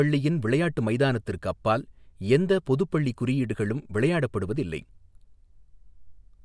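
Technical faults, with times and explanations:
Nothing technical goes wrong anywhere in this speech recording, so there's nothing to list here.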